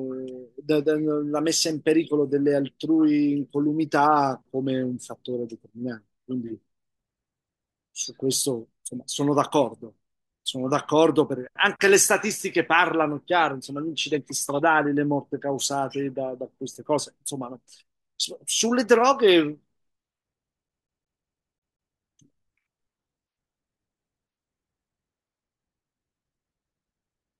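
At 20.69 s the CD gets stuck on one turn until 21.94 s. A scratch keeps throwing the laser back one track, so the same 0.18 s of speech repeats seven times, each jump marked by a brief mute, giving a fast, even stutter.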